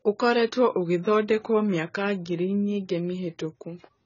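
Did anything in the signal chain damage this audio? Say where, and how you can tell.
Yes, at the codec stage, with damage running through the whole speech clip. Nothing reaches above 7 kHz, and the sound is dull and smeared, with a warbling, fizzy texture on sustained sounds and sibilants. That is likely AAC compression, heavy enough to fit a bitrate around 16 kbps. The encoder starves its frequency lines of bits, drops bands and patches holes. A plain low-pass filter or lower sample rate would dull the top the same way but leave the remaining band clean, without that swirling texture.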